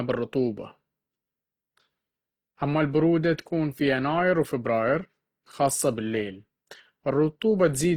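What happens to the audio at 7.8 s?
At 7.8 s the speech sounds grainy and rough throughout, likely from Opus compression at a low bitrate, with noise filling thin bands rather than MP3-style swirling holes.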